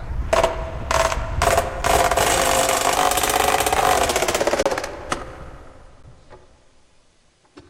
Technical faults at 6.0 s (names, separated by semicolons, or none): underrun with held sample